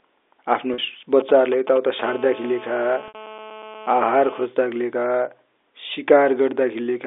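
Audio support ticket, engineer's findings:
Packet loss with pitch repetition, 0.74–0.78 s and 3.08–3.14 s. Network dropped 40 ms, then 60 ms, of the stream (fits two and three 20 ms packets). Receiver concealment looped the last pitch period to fill each gap. First gap: brief held, buzzy tone. Second: the loop runs past the roughly 50 ms fade, so it thins toward silence before the signal cross-fades back in.

GSM signalling bursts, 1.20–2.01 s. A nearby 2G handset was signalling, not in a call, sending short groups of radio bursts. Audio circuitry rectified the RF, so the bursts land in the band. Heard as a galloping dit-dit-dit of short 217 Hz buzzes, around 15 dB below the speech and unrelated to it.

GSM phone buzz, 2.04–4.46 s. A nearby 2G handset in a call, transmitting continuously at a 217 Hz burst rate. Rectified pulses produce a steady, hard, raspy 217 Hz buzz with a dense harmonic series, about 19 dB under the speech. 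It overlaps the 3.08 s dropout and its harmonics sit inside the 300 Hz–3.6 kHz telephone band of the G.711 path, so the line filtering does not remove it.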